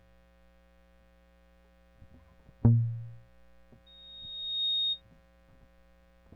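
A music clip with loudspeaker feedback squeal from 3.86 to 5.02 s: a single tone near 3.7 kHz swells over roughly the first three quarters of a second and peaks about 5 dB above the music. A microphone is picking up the loudspeaker it drives, and at that frequency the loop gain exceeds one. On a spectrogram it is one thin horizontal line that brightens, and in the waveform the envelope grows steadily.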